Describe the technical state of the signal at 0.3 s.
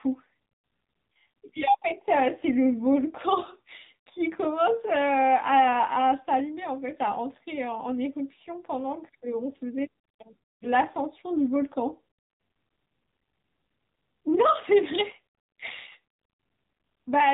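At 0.3 s the speech is passing through the AMR narrowband mobile codec, as it does for the whole clip. The audio is resampled to 8 kHz and rebuilt from a vocal-tract model fed by sparse pulses, so nothing above 4 kHz survives. It sounds plainly buzzy and synthetic, which fits a low bitrate around 7.4 kbps.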